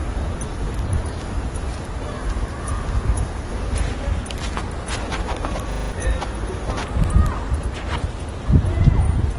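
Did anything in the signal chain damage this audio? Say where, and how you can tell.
Yes. At the codec stage, the audio is dull and smeared throughout, with spectrogram content stopping flat at 11.8 kHz. This points to likely AAC compression at a low bitrate, around 32 kbps.

At the driver or buffer stage, a system hang loop repeats one 40 ms slice of audio five times from 5.72 to 5.92 s, buzzing at 25 Hz. The waveform shows identical repeating blocks, and about a fifth of a second of audio is lost.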